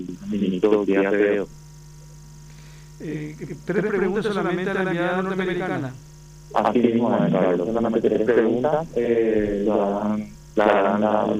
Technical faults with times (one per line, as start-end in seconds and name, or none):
0.00-11.40 channel delay (doubling)